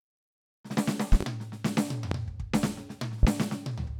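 A sudden voltage step, likely from a plug, switch, static discharge or driver glitch, gets added to the music three times, producing loud pops that stand well above it, roughly 20 dB over the signal. Between 1.12 and 1.25 s there are two in quick succession, a sharp double thump. Single pops follow at 2.11 to 2.15 s and at 3.23 to 3.27 s, each a brief crack laid on top of the music.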